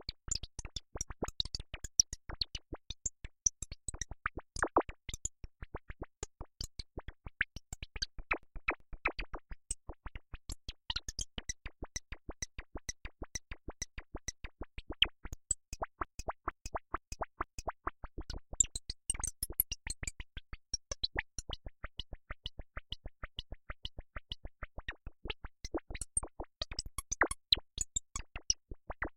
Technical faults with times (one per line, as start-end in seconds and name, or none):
8.43-9.17 repeated frames
11.96-14.75 repeated frames
16.05-17.90 repeated frames
21.99-24.78 repeated frames